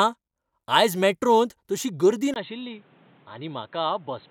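A speech recording whose character changes abruptly at 2.34 s, just after "तशी गर्दी": a gap of about 20 ms, then the sound continues to the end dull and boxy, with nothing above 4.2 kHz, roughly 10 dB quieter, and carrying a new noise floor around 30 dB below the signal. This is likely an input switched to a poorer device, with capture moving mid-recording to a narrower-band microphone or headset call profile.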